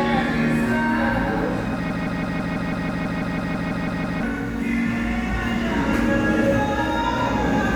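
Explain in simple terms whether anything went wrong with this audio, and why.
Something in the playback or streaming chain most likely stalled and kept resending the last small piece of audio it had, a fault known as a broken-record loop. From 1.90 s to 4.23 s, a snippet about 0.16 s long plays 14 times in a row, back to back, like a skipping record. Whatever sound should have played during those two-odd seconds is missing, replaced by the same stuttering fragment until normal playback resumes.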